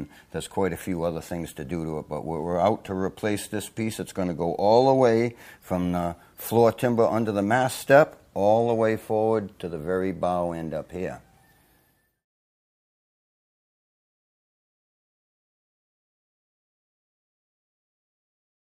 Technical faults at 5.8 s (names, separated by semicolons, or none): none